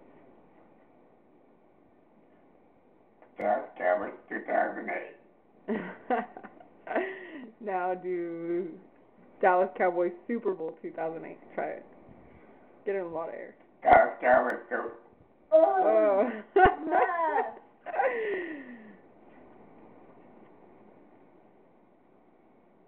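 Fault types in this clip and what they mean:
Block of digital silence: A run of samples drops to silence, then the sound resumes. Neither edge has a fade. The likely cause is an output buffer that was not filled in time. Both gaps here are tiny. The first lasts 2.18 ms at 3.41 s. The second lasts 0.73 ms at 14.50 s, which fits a 32-sample block. Each is heard as a tick or dip, not a hole, because each gap is under about 15 ms.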